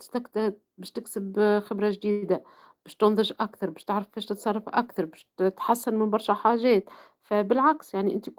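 At 2.11 to 2.24 s, just after "باش تكسب آآ خبرة", the speech stalls into a brief fading buzz of about 107 ms, then resumes intact with "باش تنضج أكثر باش". This call audio freeze likely came from delayed packets draining the jitter buffer, with the gap inserted and nothing lost.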